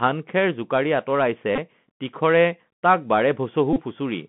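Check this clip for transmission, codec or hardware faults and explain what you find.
Two problems here, and the codec one runs the whole way through.

The Bluetooth CVSD headset codec shapes everything. It's one-bit delta coding with an adaptive step, and the sound points to the 64 kbps headset link. The band sits at roughly 150 Hz to 3.4 kHz, and s sounds come out scratchy over a grainy hiss. The damage is plainly audible.

Then there are two spots of Bluetooth headset packet repeated, at 1.56–1.58 s (about 19 ms lost) and 3.73–3.81 s (about 30 ms). Lost packets got replayed from the previous one every 3.75 ms, giving a brief buzz near 267 Hz. That fits roughly five and eight packets.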